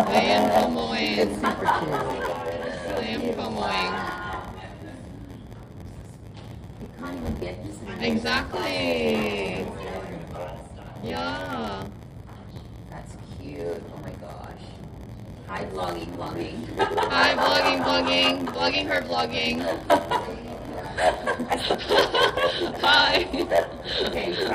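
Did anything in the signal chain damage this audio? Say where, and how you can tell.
Yes. At the driver or buffer stage there is a block size mismatch (padded) throughout: a steady 86.1 Hz buzz, and the audio runs at 0.938 speed near normal pitch. Short blocks are zero-filled to the reader's size, consistent with a 512-sample buffer.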